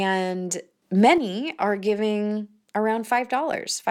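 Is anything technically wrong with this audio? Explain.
Yes. Between 0.82 and 1.18 s, the speech and its background noise abruptly get louder together by about 6 dB, then drop back with no fade. This sudden gain jump is likely a digital gain setting switched between adjacent samples without any ramp.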